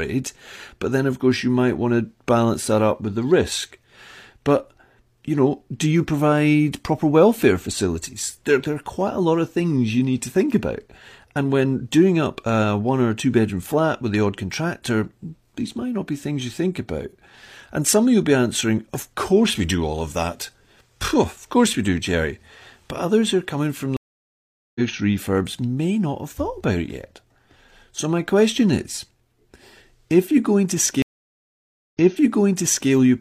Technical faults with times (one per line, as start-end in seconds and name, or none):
23.97-24.80 stream reconnect
31.02-32.90 stream reconnect